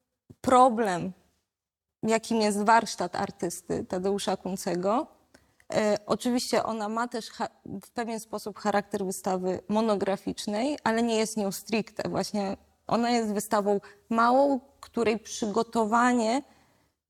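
A sudden gain jump drops the sound and its background noise together by about 6 dB from 6.66 to 8.56 s, stepping instantly rather than fading, likely an unramped digital gain change.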